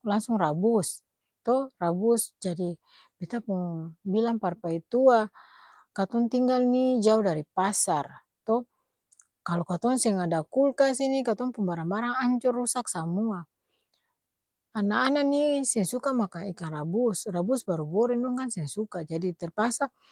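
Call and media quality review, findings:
No faults found; Opus voice path working normally.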